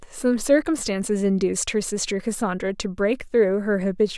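Nothing stood out on listening to this speech recording.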